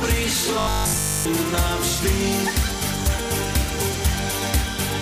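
Robotic sound from repeated short buffers runs from 0.59 to 1.27 s. The audio there takes on a rigid, metallic buzz pitched at 50 Hz. That frequency fits a 20 ms buffer being replayed over and over. The likely cause is new audio reaching the playback stage too slowly, so the software keeps repeating its last small block to fill the gaps. Most of the material in that stretch is skipped, and the sound only loosely tracks its original shape under the buzz.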